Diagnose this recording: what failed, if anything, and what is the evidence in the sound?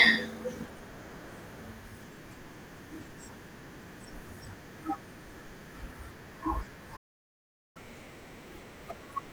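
The failure is at the playback stage. First up is a playback stall: at 6.96 s the speech just cuts out mid-flow and stays silent until 7.77 s, so roughly 0.79 s of dead air. That points to the player rather than the source. Most likely the output buffer ran dry or the playback thread got blocked, and nothing was fed to the device until it recovered.

Right after that comes catch-up at higher speed. From 7.77 s through to the end of the clip at 9.32 s, the speech runs at 1.25x and sits noticeably higher, around four semitones up, with that slightly chipmunky quality. That's the player chewing through its backlog by resampling instead of time-stretching, so speed and pitch rise together. It's trying to claw back the time lost in the stall, and the clip ends before it settles back to normal.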